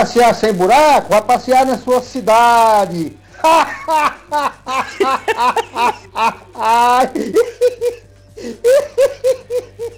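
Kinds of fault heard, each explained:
Filter restarted on every block: a steady 200 Hz buzz runs through the whole clip, growing louder where the sound is strong and sinking where it is quiet. The filter is throwing away its memory at each block boundary and starting again as if from silence, so every block opens with a small transient. Those clicks repeat 200 times a second, which fits blocks about 5 ms long, and their size tracks the signal level.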